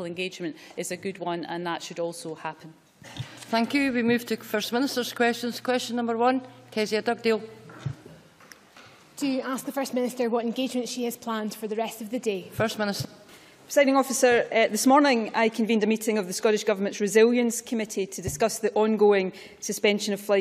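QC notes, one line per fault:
Nothing stood out on listening to the audio.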